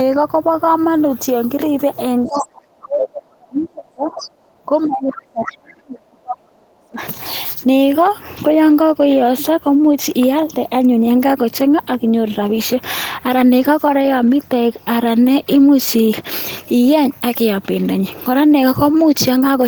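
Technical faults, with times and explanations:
2.25–7.01 s, speech suppressed in double talk: the echo canceller likely could not separate the near talker from loudspeaker echo while both sides spoke, so it turned everything down. The speech dips over roughly five seconds, falling by as much as about 35 dB.
2.26–2.42 s, 3.02–3.08 s and 4.17–4.28 s, other side's voice leaking through: residual loudspeaker sound likely escaped the canceller into the microphone. Brief scraps of the far voice appear at about 20 dB, 5 dB and 15 dB below the speech.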